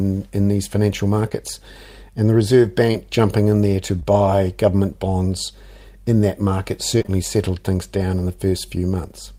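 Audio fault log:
1.29 to 7.10 s, short concealed packet loss: 20 ms packets arrived too late for the decoder at 1.29 s after "in these financial", at 2.91 s, twice in a row at 4.00 to 4.06 s between "jumping in there to" and "government bonds in that", and three times in a row at 6.98 to 7.10 s between "bonds in that market" and "settled things down in". Each time the receiver extended the preceding sound for 12 to 27 ms and then blended back into the real audio. Each gap is heard as a brief smear or wobble. In the back-to-back losses the concealment runs longer and can swallow a short consonant.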